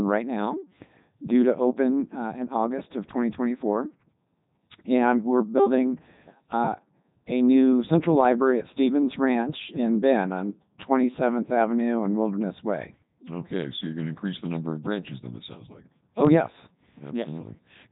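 From start to finish the speech has gone through the Codec 2 vocoder, and it's heavily damaged. The sound points to the codec's top mode, around 3.2 kbit/s. Rather than keeping the waveform, the coder sends only pitch, voicing, energy and a rough spectral envelope, and the decoder rebuilds the voice from sine waves. That's why it comes out robotic and buzzy, with nothing at all above 3.8 kHz.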